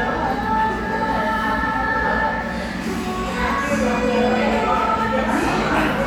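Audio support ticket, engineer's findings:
Nothing stood out on listening; no symptom to log against this ticket.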